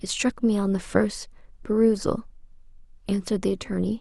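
No technical faults can be heard anywhere in the speech. Nothing in the recording needs a timestamp or a fault description.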